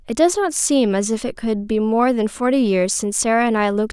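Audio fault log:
No fault found in this speech clip.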